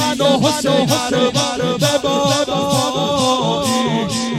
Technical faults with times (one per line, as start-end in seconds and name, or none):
0.67 bit error spike
2.69 bit error spike